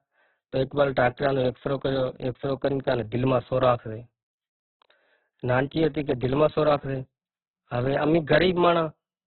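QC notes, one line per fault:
Throughout: Opus compression. Nothing is present above about 4.1 kHz, so the speech is confined to a narrowband telephone-like range and sounds muffled, while the remaining tones come out grainy, rough and noisy. The likely cause is Opus in its CELT mode at a very low bitrate, around 8 kbps, which keeps each band's energy but refills detail with folded or noise-like content. On a spectrogram there is a flat ceiling near 4.1 kHz with speckled, smeared harmonics below it.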